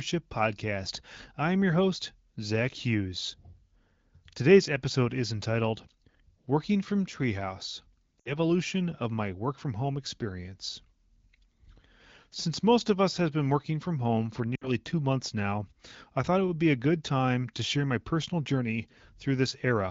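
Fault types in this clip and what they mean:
Lost AMR speech frames: frames failing their radio checksum were concealed by repeating earlier settings at fading gain, causing two brief, near-silent 60 ms dips in the speech.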